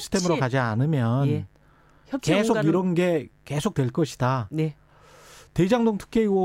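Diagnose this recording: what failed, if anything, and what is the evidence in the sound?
Mains buzz enters at the analogue wiring stage and runs the whole length of the speech. A steady, raspy buzz sits under the voice, roughly 40 dB below it, built on a 50 Hz fundamental with harmonics extending into the kilohertz range. The rasp comes from sharp switching spikes, such as those from a dimmer, a rectifier or an unshielded cable run, coupling into the signal twice per mains cycle and spreading energy across many harmonics.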